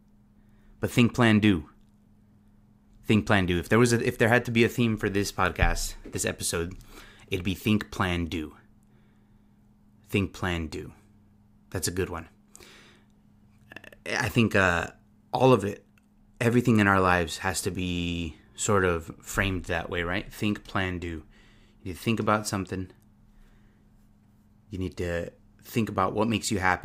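Nothing in this speech recording points to a technical fault, and the signal holds steady with no audible interruption or damage at any point.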